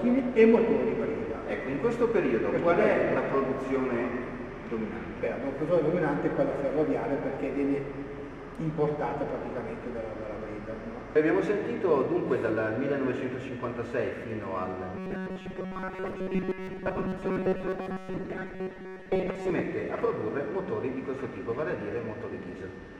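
From 14.97 s to 19.50 s the sound turns robotic, the fault known as robotic sound from repeated short buffers. A rigid, metallic buzz near 188 Hz comes in. That pitch fits a chunk of about 5 ms being replayed. The likely cause is audio arriving too slowly, so short buffers repeat and most of the real signal is skipped.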